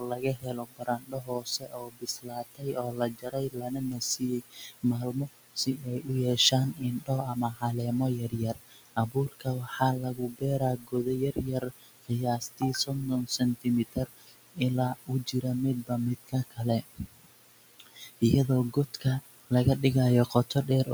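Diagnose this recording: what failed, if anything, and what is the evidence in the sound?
The failure is in call processing, in the form of noise suppressor artifacts across the whole recording. The room noise, about 14 dB below the speech, is pulled down by about 19 dB in the gaps and returns under each phrase, so the floor pumps. The suppressor estimates a steady noise profile and applies per-band gains frame by frame. A spectrogram would show near-empty gaps, ragged isolated specks in the residual, and noise bands reappearing only beneath the speech energy.

Speech cut by the noise suppressor shows up in three spans. From 0.0 to 7.63 s, roughly 4 seconds of material is affected. From 8.19 to 19.51 s, around 3 seconds is hit. Briefly from 20.26 to 20.88 s, about 0.15 seconds is affected. Soft consonants and word tails sound swallowed, with drops of about 22 dB in the first two spans and about 13 dB in the last. 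The gain mask mistook low-level speech for noise. The waveform would show clipped-off decays, and the spectrogram would show missing high-frequency fricative energy.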